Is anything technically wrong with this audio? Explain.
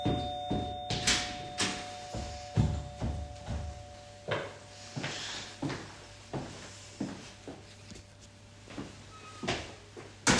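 No, there is nothing technically wrong with this audio. No faults can be heard anywhere in the recording.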